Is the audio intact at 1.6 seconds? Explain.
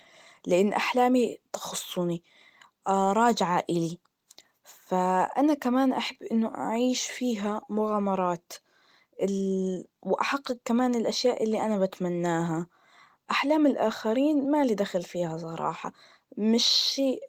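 Yes, the speech at 1.6 seconds plays through intact, with no audible fault at that moment.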